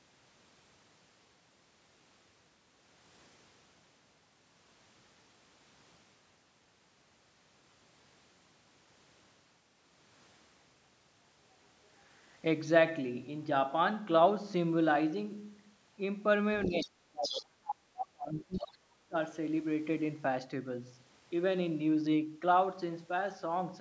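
From 16.63 s a second, fainter voice intrudes in scraps at 16.63, 17.23, 17.67 and 18.56 s. This is the other side's voice leaking through, likely loudspeaker echo the canceller missed, and it sits roughly 5 to 15 dB below the talker. Across 16.67 to 19.15 s the talker's own voice also dips and breaks up, by as much as about 35 dB and for around two seconds in total. That is speech suppressed in double talk, likely the canceller turning both voices down. It differs from the leak because the main voice is lost rather than a foreign one added.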